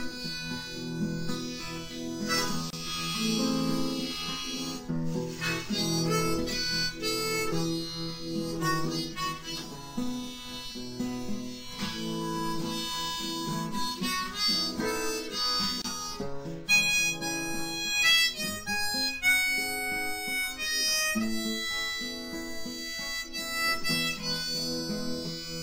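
At 2.70 s and 15.82 s, a gap at a join of encoded pieces drops about 27 ms of silence into continuous sound. Untrimmed encoder delay and end padding were left at each join.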